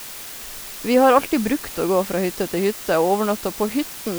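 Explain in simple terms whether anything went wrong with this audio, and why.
The speech carries a steady, even hiss from start to finish. That's low bit depth with dither: it sounds like 6-bit audio, with added noise hiding the rounding errors.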